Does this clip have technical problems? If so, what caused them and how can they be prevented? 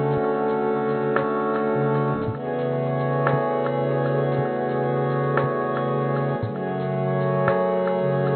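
No, the music comes through as a steady, intact signal with no audible technical faults, so there is nothing here that needs preventing.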